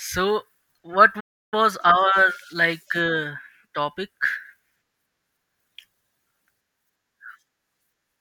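Speech, interrupted by a playback stall from 1.20 s to 1.54 s: the sound cuts out mid-flow for roughly 320 ms of silence before continuing. The likely cause is the player running out of buffered data or its playback thread being blocked.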